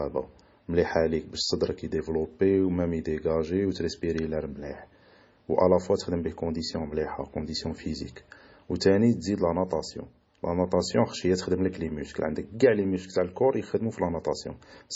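From start to finish the speech carries the smeared, watery texture and dulled top end of heavily compressed MP3 audio, even though the file itself is at a generous bitrate. This is likely low-bitrate audio saved at a high bitrate. The sound points to an earlier MP3 pass around 24 kbit/s that was later re-encoded at about 192 kbit/s. The second encoding kept everything the first left behind but could not restore the detail it had already removed.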